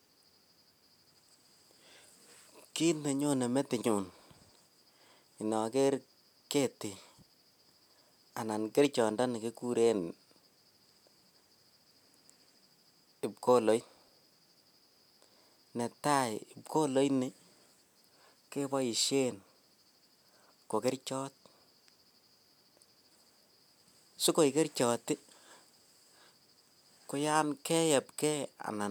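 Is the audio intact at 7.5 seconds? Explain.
Yes, the speech at 7.5 seconds plays through intact, with no dropout, click, distortion or other fault at that point.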